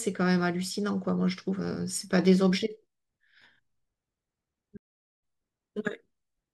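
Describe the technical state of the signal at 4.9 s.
At 4.9 s the signal is inside a stream reconnect gap, from 4.77 to 5.17 s. The connection dropped, leaving 0.4 s of silence, a flat waveform and an empty spectrogram column. A fresh decoder then resumes the speech roughly 0.3 s further on.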